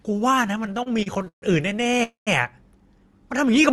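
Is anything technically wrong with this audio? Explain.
Yes. The speech has two timing faults.

From 0.63 to 2.01 s there are repeated stalls (stutter). Packets kept arriving late, so the jitter buffer emptied over and over, more than twenty times. The receiver stretched the last sound to bridge each wait, the longest about 140 ms. The speech drags and stutters, though nothing is lost.

From 2.03 to 2.29 s there is a call audio freeze. The sound holds for about 0.23 s, and the last 140 ms of that is silent. The likely cause is delayed packets leaving the jitter buffer empty. The speech then resumes where it stopped, with nothing missing.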